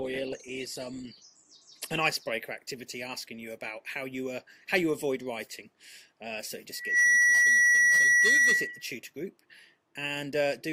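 For the first 2.0 s the sound is dull and grainy, with nothing above 12.1 kHz, then it brightens abruptly without a gap. This is an adaptive stream starting at a low bitrate: a setting that fits Opus at 16 kbit/s, stepping up to around 64 kbit/s once the connection was gauged.

From 6.71 s to 8.94 s a steady 1.9 kHz tone swells within about a third of a second into a squeal roughly 10 dB above the programme. It is loudspeaker feedback squeal, where the microphone re-amplifies its own loudspeaker until that frequency runs away.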